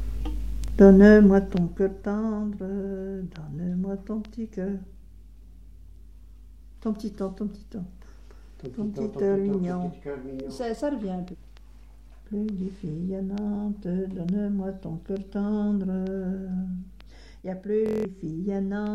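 Bluetooth stutter at 0.68–0.70 s, a single slice repeating, then a longer machine-gun buzz at 17.86–18.05 s as the receiver replays stale buffers through a run of dropped packets.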